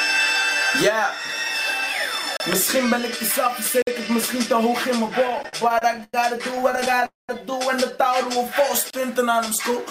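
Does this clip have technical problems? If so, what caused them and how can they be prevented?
Yes, there are four kinds of fault here.

Blocks of digital silence: the audio drops to silence at 2.37–2.40 s (about 32 ms), 3.82–3.87 s (about 51 ms), 5.43 s (an 11 ms blip) and 8.90–8.93 s (about 30 ms). Each cut and restart is abrupt. The 11 ms one reads as a tick and the 51 ms one as a small hole. This happens when the output buffer isn't filled in time and zeros go out instead. To prevent it, give the audio thread higher priority or a bigger output buffer so it never misses its deadline.

Repeated stalls (stutter): from 5.28 to 6.15 s there are 11 separate stalls. Together they add about 249 ms of filled-in sound, the longest being 98 ms, so roughly 29% of that stretch is concealment. From 6.51 to 7.04 s there are another 11 shorter ones, totalling about 104 ms with none longer than 16 ms. 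Nothing is lost, but the audio drags and stutters because packets kept arriving late and the jitter buffer kept running dry. To prevent it, fix the congested or unstable network path, or let the jitter buffer hold more delay.

Call audio freeze: at 7.06–7.31 s the sound hangs for about 230 ms. There's a brief continuation of the last sound, then about 170 ms of silence, and then it picks up exactly where it left off, pushing everything after it later by about 230 ms. The likely cause is a burst of packets held up in transit that emptied the jitter buffer. To prevent it, you'd need a steadier network link, for example wired rather than Wi-Fi, or with QoS prioritising the call traffic.

Jitter buffer slow-down: between 8.37 and 9.07 s the audio plays at about 94% speed with the pitch unchanged. About 42 ms is added by repeating tiny pitch-period-sized chunks, which gives a slightly stretched, drawn-out feel. 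The receiver was building up a reserve in its buffer. To prevent it, cut down the underruns upstream (the stalls and the freeze above) so the buffer doesn't need to stretch to recover.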